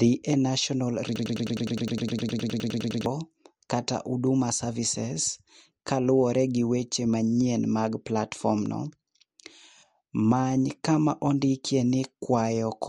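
Throughout the clip, the speech shows damage that most likely comes from MP3 compression at a low bitrate, one that fits roughly 48 kbps. Short of bits, the encoder discarded everything above 11.2 kHz, so the top end is missing. It also zeroed weaker frequency lines that flicker on and off from frame to frame. That gives a plainly audible watery, swirling texture, with metallic chirps on s sounds and softened attacks.

From 1.16 to 3.06 s, a broken-record loop takes over. The player or stream likely stalled and kept resending the last fragment it held, a 103 ms piece that repeats back to back 18 times. It sounds like a rapid, mechanical stutter of one tiny slice of speech. The audio that should have played across those two seconds never arrives.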